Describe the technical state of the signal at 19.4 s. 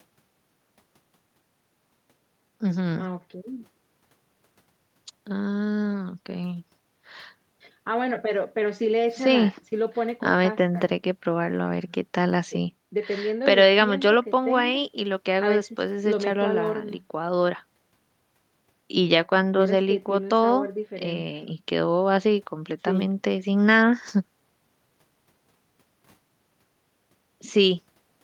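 At 19.4 s the speech signal is intact, with no dropout, clipping, glitch or other fault audible at that point.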